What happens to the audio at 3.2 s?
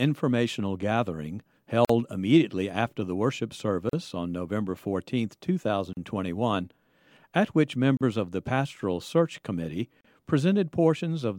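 Nothing goes wrong at 3.2 s; the speech there plays through intact, with no dropout, click, distortion or other fault.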